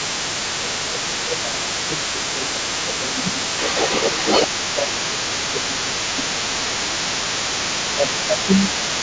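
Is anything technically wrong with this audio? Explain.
Yes, there are two faults. Other side's voice leaking through runs across the whole clip: a second voice sits only about 5 dB below the main speech, most likely because the echo canceller failed to remove loudspeaker playback picked up by the microphone.

Speech suppressed in double talk occurs at 0.18–0.29 s, 0.59–3.65 s, 4.58–4.90 s, 5.09–6.80 s, 7.95–8.02 s and 8.27–8.87 s. The talker's level dips by about 5 to 15 dB, likely because the canceller couldn't separate them from the echo and attenuated both.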